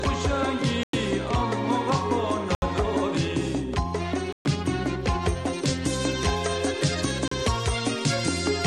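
The audio drops to silence four times: at 0.83 to 0.93 s (100 ms), 2.55 to 2.62 s (71 ms), 4.33 to 4.45 s (126 ms) and 7.28 to 7.32 s (37 ms). These gaps are most likely Bluetooth stalls: radio interference delayed packets, the receiving buffer emptied, and output halted until retransmitted data arrived. From 5.53 s to the end, the tonal balance shifts sharply upward. Treble sits about 10 dB higher at 10 kHz than at 1 kHz, following a 50 µs FM-style boost curve, so the sound turns thin, glassy and hissy with exaggerated sibilance. That points to pre-emphasis left on: the high-frequency lift was applied upstream, but the complementary de-emphasis filter that should restore flat response was never engaged, leaving the boost in the output.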